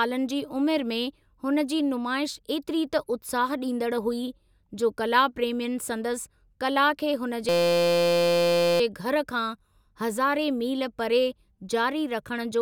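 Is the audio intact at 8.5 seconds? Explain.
No. From 7.49 to 8.80 s a system hang loop holds: the system froze while the hardware kept replaying one 5.8 ms piece of sound, which fits a 256-sample buffer. Because each repeat is identical, it forms a steady 172 Hz buzz rather than irregular crackle or dropouts.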